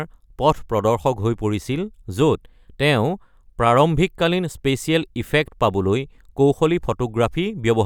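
No faults are audible anywhere in the recording.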